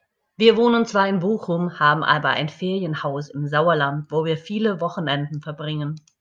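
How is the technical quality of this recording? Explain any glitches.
No glitches to explain: the speech recording is technically sound throughout, with no audible faults at any point.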